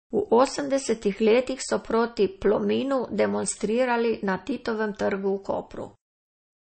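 Speech runs through the whole clip with plainly audible damage typical of MP3 compression: a watery, swirling quality on the voice, with sibilants turning metallic and chirpy and consonant onsets smeared. The likely cause is a starved MP3 encode, with artefacts at a level that fits roughly 32 kbps. A spectrogram would show the treble cut off flat at 8.4 kHz, with scattered time-frequency holes flickering on and off from frame to frame below it.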